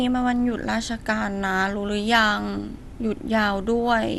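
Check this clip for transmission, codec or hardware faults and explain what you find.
The speech carries audible codec damage throughout. This is MP2 compression, likely at a low bitrate around 80 kbps: too few bits leave nothing above 12.2 kHz and coarsely quantise the remaining sub-bands, so the sound is dull, with flickering bands and a granular gurgle.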